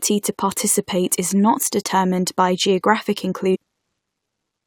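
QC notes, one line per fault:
3.54–3.56 s, stream segment skipped: after "not determined by geographic" speech jumps ahead with a blip, likely a dropped stream segment; waveform shows an abrupt splice.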